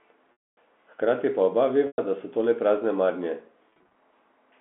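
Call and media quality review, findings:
Packet loss with pitch repetition, 0.32–0.57 s: about 250 ms lost. Jitter buffer/PLC loops the last pitch period and fades it out within about 50 ms, then silence and a short cross-fade back into speech. The gap fits 10 ms packets.

Same fault, 1.87–1.98 s: 110 ms lost. A brief buzzy hold decays to silence before the speech returns.

Same fault, 3.70–3.96 s: 140 ms lost in scattered runs over 260 ms, the longest 30 ms. Each run is bridged before the fade completes, so it sounds like a string of slightly held, buzzy flickers. The 200 Hz–3.5 kHz telephone band from the G.711 line can be heard throughout.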